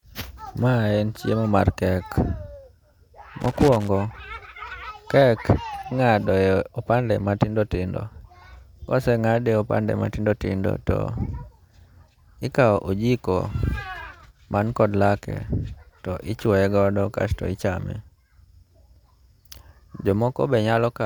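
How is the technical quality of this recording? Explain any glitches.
The recording has one glitch, a loose connector crackle from 3.41 to 3.88 s. For about half a second the speech is overlaid with an irregular burst of scratchy crackle. The cause is a worn or dirty contact in the signal path that connects and disconnects rapidly as it shifts. Each break chops the audio, and any DC sitting on the line turns each reconnection into a click.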